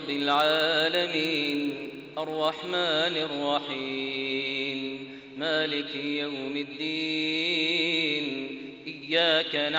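From 0 to 2.7 s the resampler restarted on every 50 ms block, likely an upsampling step from 16 kHz to 48 kHz, leaving edge errors heard as a 20 Hz buzz.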